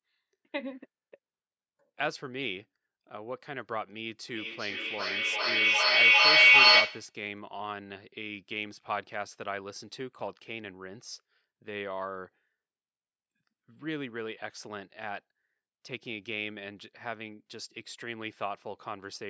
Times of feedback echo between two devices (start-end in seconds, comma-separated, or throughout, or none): 4.27-7.18